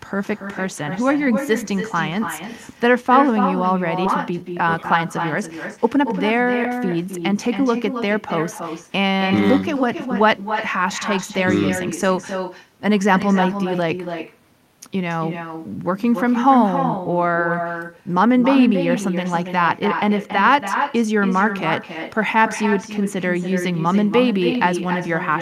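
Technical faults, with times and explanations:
throughout: echo with no canceller. A copy of the speech returns roughly 0.3 s later, about 7 dB quieter. The far end's loudspeaker output reaches its microphone and nothing removes it, so the sound comes back after the network round trip.
4.05 to 4.07 s: skip ahead. Roughly a second of audio is missing, with no gap filled in, so the two sides of the jump butt together almost directly. The dropped stretch was discarded while later audio was already queued, cutting the delay by about that much.
4.29 to 5.05 s, 5.76 to 8.15 s and 8.84 to 11.46 s: jitter buffer speed-up. Playback runs at 124%, 108% and 105% speed at unchanged pitch, sounding hurried. The receiver trimmed many short pitch-period pieces to shed excess buffered delay, roughly a fifth, a fifth and 0.15 s.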